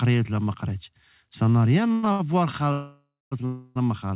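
At 1.92 to 2.05 s there's a call audio freeze. The last sound gets carried on as a fading buzz for about a tenth of a second, and then the speech picks up right where it left off. That's most likely packets held up in transit until the jitter buffer ran dry. The same thing happens again at 2.72 to 3.33 s, a longer one that fades out to about 0.23 s of outright silence before resuming. There's one more at 3.45 to 3.77 s, roughly 0.3 s of smeared-out tail.

In between, at 2.12 to 2.21 s, there's a short stall from a late packet. A sound is held about 70 ms too long with a slight buzz while the receiver waits, then carries on with nothing lost. The whole thing sits under a 4 kHz ceiling, which fits a G.711 mu-law call path.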